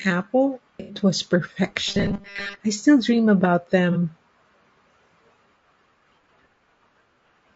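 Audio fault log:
throughout, low-delay AAC compression: the speech was likely coded with AAC-ELD at a low bitrate, which fits 32 kbps; its short frames resolve pitch harmonics poorly, so the voice sounds plainly rough and grainy, with noise filling the gaps between harmonics and a thin, synthetic-sounding top band.
0.80 to 0.95 s and 3.92 to 3.97 s, AAC frame loss with concealment: coded frames went missing, which fits about 90 ms and then 30 ms of lost audio, and the decoder rebuilt them from the last good spectrum; each gap comes out as a brief smeared, noisy patch, the second just after "I still dream about".
1.88 to 2.61 s, robotic sound from repeated short buffers: fresh audio likely arrived too seldom, so the playback repeated the last few milliseconds of sound, replaying most of this stretch while real audio was skipped; the loop imposes a rigid 200 Hz metallic buzz just before "I still dream about".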